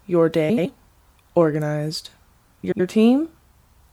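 Frames out of order occur at 0.49 to 0.66 s and again at 2.63 to 2.80 s. Both times, two neighbouring 78.4 ms blocks were decoded swapped, which fits runs of three frames. The sound garbles into a flutter. No time is lost.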